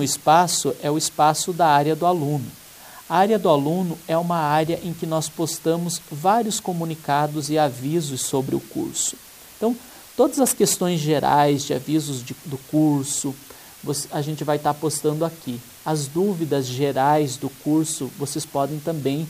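Low bit depth with dither runs throughout: dither before coarse rounding, consistent with about 7 bits, turns quantisation error into a constant even hiss, roughly 25 dB below the sound.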